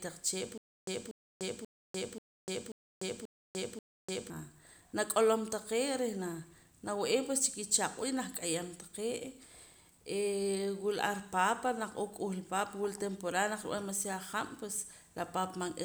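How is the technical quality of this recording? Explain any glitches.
The recording has one clear playback fault. From 0.58 s to 4.3 s there is a stutter with silent gaps: a 239 ms fragment repeats seven times, each followed by 297 ms of dead digital silence, a steady 535 ms cycle. The likely cause is a stalled stream replaying its last buffered chunk on each retry, so the speech that should fill that stretch is missing.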